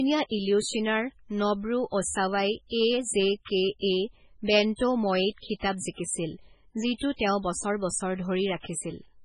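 Right from the start and all the way through, the speech carries heavy damage that sounds like MP3 compression is the likely culprit. There's nothing above about 10.5 kHz, so the top end is simply gone, and the rest has that watery, swirly quality you get when the encoder starves weak frequency lines and they flicker in and out between frames. Sibilants come out metallic and chirpy, and onsets smear. All of that fits a very low bitrate, something around 16 kbps.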